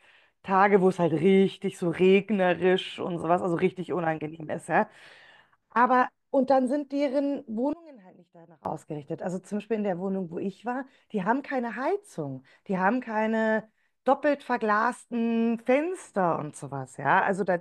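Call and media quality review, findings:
Speech drops to a faint residue from 7.73 to 8.65 s, about 22 dB down. Likely one channel inverted. Centred content cancels in the mono sum.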